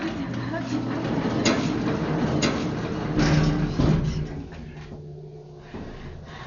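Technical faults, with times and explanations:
Throughout: Dolby Digital compression. Nothing is heard above 7.1 kHz, so the audio sounds dull, and tones carry a rough, fluttering noise where the coder left many frequency lines without real detail and filled them with dither noise. This heavy damage is likely from AC-3 style coding at a low bitrate, around 48 kbps. A plain low-pass filter would also remove the top end, but it would not add this rough noise around tones.
1.04 to 3.94 s: doubled audio track. A second full-band copy of the audio runs about a second behind the original, at roughly the same loudness. It is likely a second capture through a slower path, or an edit that left two copies out of step. It differs from an echo or reverb because the copy has no decay and no room colour. It also cuts in and out abruptly at both ends of the span instead of fading.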